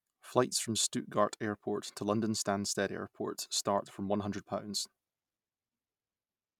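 No technical faults can be heard anywhere in this recording.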